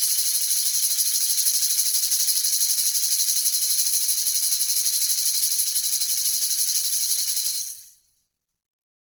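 Throughout the music, a low-rate encoder likely starved of bits, consistent with Opus compression near 16 kbps, fills bands with folded or noisy content, leaving tones rough and grainy.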